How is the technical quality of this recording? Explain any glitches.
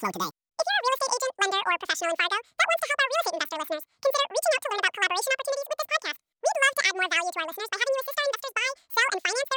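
Poor, because the speech plays back wrongly for its whole length. Throughout, audio read two samples at a time (double speed) makes the reader treat sample pairs as single frames, doubling speed and raising pitch an octave. It sounds chipmunk-like, and a spectrogram shows harmonics stretched upward.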